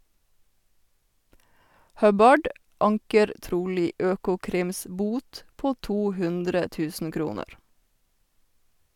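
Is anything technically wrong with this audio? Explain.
No, nothing technically wrong can be heard in this speech recording.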